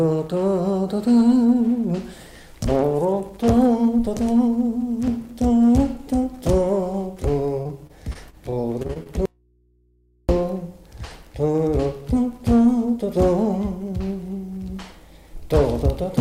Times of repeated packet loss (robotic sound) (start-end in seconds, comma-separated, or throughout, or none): 7.43-9.07